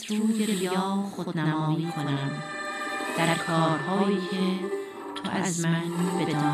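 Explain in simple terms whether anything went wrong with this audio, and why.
Something did go wrong: a channel delay (doubling) runs through the whole clip. One channel arrives about 85 ms late, which fits a 4096-sample buffer, and when both are mixed together every sound is heard twice, like a quick slap echo at equal loudness.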